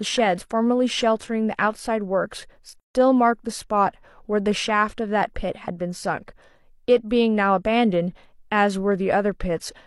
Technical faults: gap at a join of encoded pieces

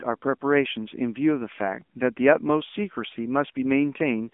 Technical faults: AMR narrowband mobile codec

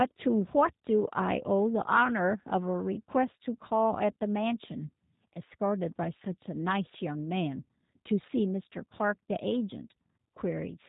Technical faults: G.729 codec

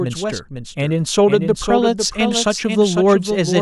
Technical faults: doubled audio track; clock slip clicks

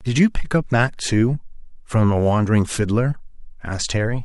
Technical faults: none

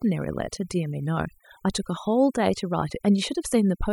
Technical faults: overdone noise removal

